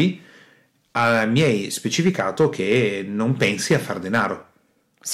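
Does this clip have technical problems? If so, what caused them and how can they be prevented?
Yes, there is hard clipping at 0.00 to 0.05 s, 0.97 to 1.51 s, 1.99 to 2.87 s and 3.42 to 4.26 s. The speech was driven about 4 dB past full scale in the first and third stretches and about 8 dB past in the second and fourth, so peaks are sliced flat, producing crackle and harsh fuzz. A waveform shows squared-off tops, and a spectrogram shows broadband harmonic smearing above the speech. Leaving headroom or limiting before the converter prevents it.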